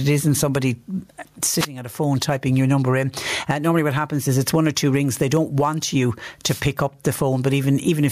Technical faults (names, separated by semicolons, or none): gain pumping; wireless microphone noise hit